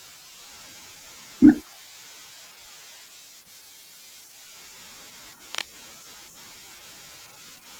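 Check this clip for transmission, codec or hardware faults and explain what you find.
One hardware fault is audible. From 5.54 to 5.76 s there is cable scratch noise: a dense, uneven burst of scratching and rustling over the speech, only slightly quieter than the speech itself. It is likely caused by a worn cable or connector being moved, its contact resistance fluctuating rapidly.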